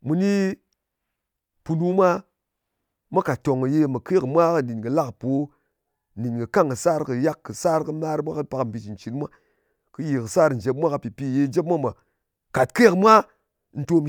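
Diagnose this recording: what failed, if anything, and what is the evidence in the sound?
No fault detected anywhere.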